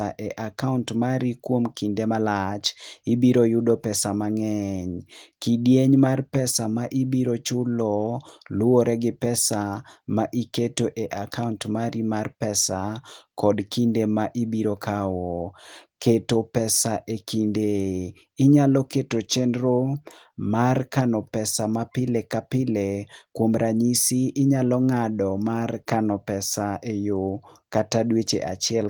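Speech, no faults: the audio carries the light coding of Opus voice compression, pointing to hybrid mode at about 24 kbps, with content extending to about 20.2 kHz.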